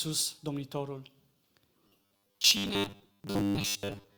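From 1.88 s to the end, the speech becomes a rigid 100 Hz metallic buzz: robotic sound, likely from repeating a 10 ms buffer through most of that stretch.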